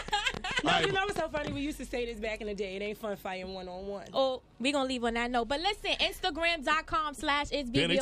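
A train of clicks runs from 0.08 to 1.48 s: around fifteen similar pops at about 9.4 per second, unevenly spaced and roughly 15 dB above the audio, ticking through the pauses as well. Unlike random crackle, the repeated identical shape points to likely equipment interference or a faulty connection or power supply.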